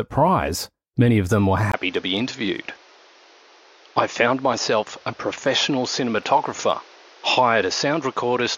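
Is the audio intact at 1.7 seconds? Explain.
No. Right after "many of them were", at 1.72 s, a 20 ms gap gives way to duller speech at about the same level, with nothing above 6.9 kHz and a new faint background noise, continuing to 8.57 s, likely because the input switched to a poorer device.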